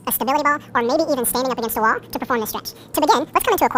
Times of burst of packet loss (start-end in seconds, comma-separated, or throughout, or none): none